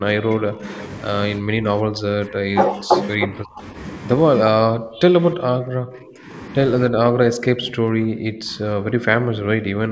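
An echo canceller that likely could not tell the near talker from loudspeaker echo while both sides spoke clamped the microphone signal, causing speech suppressed in double talk. The speech dips or drops out at 0.0–0.67 s, 1.4–2.54 s, 2.78–2.93 s, 3.27–3.75 s, 4.44 s, 4.66–5.13 s, 5.31–6.3 s and from 6.9 s to the end. The brief cuts at 2.78 s and 4.44 s are shallow, roughly 5 to 10 dB. From 5.31 s the speech nearly vanishes, falling by about 40 dB.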